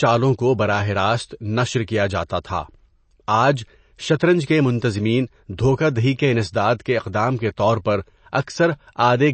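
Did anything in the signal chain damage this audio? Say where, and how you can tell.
Yes, at the codec stage, for the full length of this speech. Nothing is present above 8.3 kHz, a hard ceiling where an encoder short of bits discards the treble outright, and below it the coding damage is plainly audible as a watery, swirling texture. This is likely MP3 compression at a low rate that fits about 32 kbps. The encoder zeroes weaker frequency lines that then switch on and off between frames.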